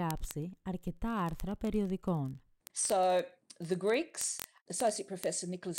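From 0.11 s to the end of the speech, a steady train of word clock ticks runs under everything, roughly every 20 ms, some three hundred in all. The receiving device is free-running rather than locked to the sender's clock, and the two disagree by something like 0.1 percent. Each time they slip past each other, a single sample is dropped or repeated, leaving a small discontinuity that lands as a tick about fifty times a second.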